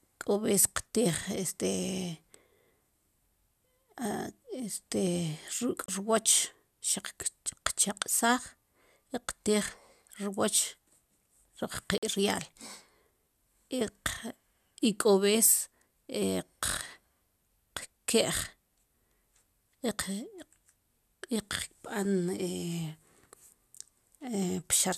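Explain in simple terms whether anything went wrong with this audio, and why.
Two brief digital broadcast dropouts cut the speech, at 5.86–5.89 s and 11.98–12.03 s. The receiver lost valid data and muted. The gaps fit one and two lost frames.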